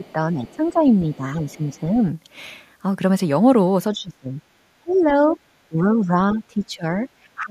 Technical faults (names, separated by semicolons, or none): speech suppressed in double talk; other side's voice leaking through